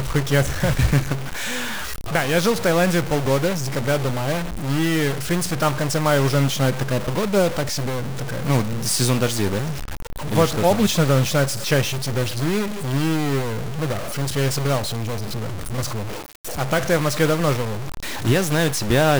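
From start to finish, the speech carries a buzzy distortion, and even the pauses don't go quiet; they fill with noise. That points to a stuck bit, likely one data line held at 0 or 1 in the converter or the path feeding it. About half the samples get knocked off by that bit's weight, which sits somewhere around -25 dBFS, a fairly high bit. The error pattern follows the waveform, and it flips with the sign of small values, so the gaps hiss too.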